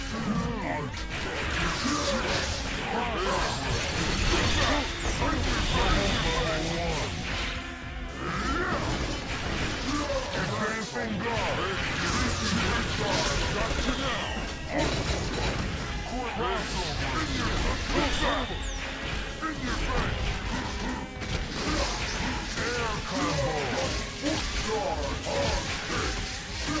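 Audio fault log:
throughout, wrong sample rate: everything sounds slowed and lowered, at 0.73 speed and 5.55 semitones down, which fits 22 kHz audio played at 16 kHz without conversion.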